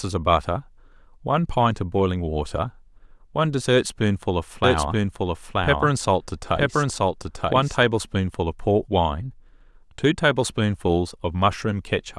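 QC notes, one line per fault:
4.64–7.84 s, doubled audio track: a second full-band copy of the speech trails about one second behind at roughly equal level, likely from a slower duplicate capture path.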